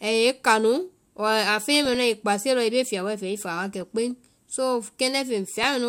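Speech with short noise blips at 1.74–1.95 s, 3.81–4.52 s and 5.63 s: DAB burbling, where weak reception lets bit errors corrupt MP2 sub-band levels.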